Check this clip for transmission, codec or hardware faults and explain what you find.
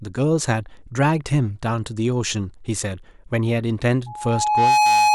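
One fault is present, a loudspeaker feedback squeal from 4.06 s to 5.14 s. The microphone picks up its own loudspeaker, and at 843 Hz the loop gain exceeds unity. A single tone swells over most of a second until it sits about 5 dB above the speech.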